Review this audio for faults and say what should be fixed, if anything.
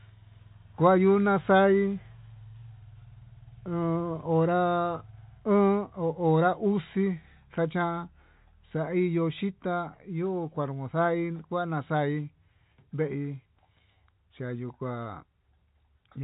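Nothing here needs fixing; the speech simply carries the usual narrow telephone band of G.711 coding, with nothing above about 3.8 kHz.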